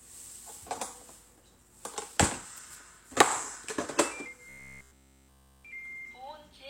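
Everyday sounds, where from 4.49 to 5.65 s a robotic sound, likely from repeated short buffers, imposes a 66.7 Hz buzz: essentially identical 15 ms waveform cycles, shown on a spectrogram as evenly spaced harmonic stripes.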